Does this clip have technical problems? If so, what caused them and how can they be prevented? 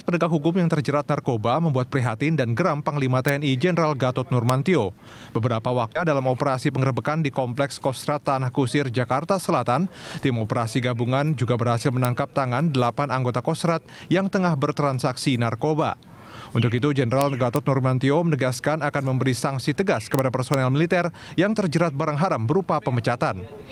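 Yes. Violent, sharp cracks land on loud peaks at 3.29 s, 4.50 s, 12.05 s, 17.21 to 17.56 s, 20.15 to 20.19 s and 20.54 s, harsher than ordinary clipping. This is integer overflow: loud samples exceeded the largest integer value and wrapped to the opposite sign instead of being limited. Saturating arithmetic, or clamping before conversion to integer, would prevent it.

Around 5.95 to 6.06 s the audio jumps forward with no gap, losing about 0.7 s of material, and the two sides are spliced almost directly. This is a skip ahead, where a backlog of waiting audio was discarded to catch up. Better jitter buffer sizing and smoother network delivery would prevent it.

From 6.54 to 7.11 s the sound runs about 11% fast at unchanged pitch and feels hurried. This is a jitter buffer speed-up: the receiver cut short pitch-period pieces, around 70 ms in total, to drain excess buffered delay. Steadier packet arrival would reduce the need for it.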